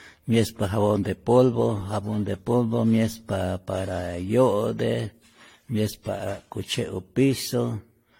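Generation loss runs through the whole speech clip: the sound is swirly, smeared and hollow, with blurred attacks and nothing above 16.6 kHz. This likely comes from about five successive lossy encodes, which fits AAC-LC at around 64 kbit/s, each pass compounding quantisation noise.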